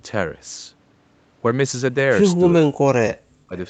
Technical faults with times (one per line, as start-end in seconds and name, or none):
2.65-3.55 speech suppressed in double talk